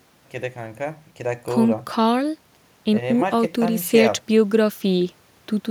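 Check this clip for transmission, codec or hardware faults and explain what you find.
I found no faults to explain in this clip.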